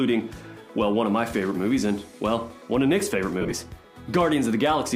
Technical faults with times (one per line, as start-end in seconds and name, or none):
3.41-3.52 lost LE Audio frames